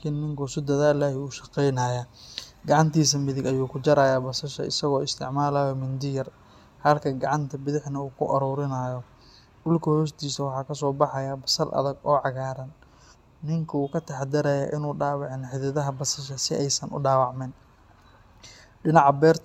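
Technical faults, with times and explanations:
Throughout, generation loss: the speech sounds swirly, hollow and smeared, and consonant attacks are blurred. This likely comes from the audio being lossy-encoded about four times over, which fits repeated AAC passes around 96 kbit/s. Each pass adds fresh quantisation noise and spectral gaps.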